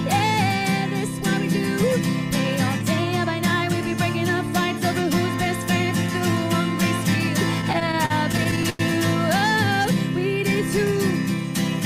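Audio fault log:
7.61–8.81 s, repeated stalls (stutter): The sound catches and hangs fourteen times in just over a second. Packets arrived late or slower than playback, so the jitter buffer kept running dry. Each time, the receiver stretched the last sound to cover the wait, fading it during the longer pauses. About 258 ms is filled this way, roughly a fifth of the span, with the longest hold at 96 ms. Nothing is lost, but the passage drags and stutters.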